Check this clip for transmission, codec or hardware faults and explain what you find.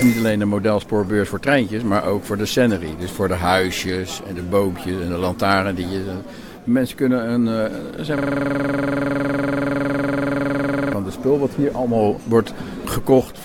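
One hardware-level fault is present: a system hang loop from 8.18 to 10.93 s. The computer or its audio driver stopped supplying new data, so the sound hardware kept replaying the last block still in its ring buffer. That block is about 46.4 ms long, which fits a 2048-sample buffer, and it repeats exactly around 59 times at 21.5 Hz. Because the loop is this short, it comes across as a rapid, rattling buzz on one frozen fragment rather than separate stutters.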